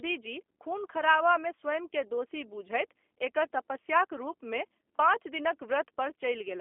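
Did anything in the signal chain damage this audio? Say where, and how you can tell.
Yes, at the codec stage: G.729 coding throughout leaves a rough, synthetic speech texture consistent with 8 kbit/s. The spectrogram shows nothing above about 3.5 kHz.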